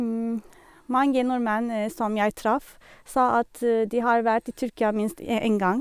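Listening through the recording, nothing stood out as a technical problem at any point.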